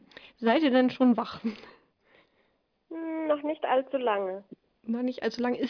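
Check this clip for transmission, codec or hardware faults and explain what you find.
No faults can be heard anywhere in this clip.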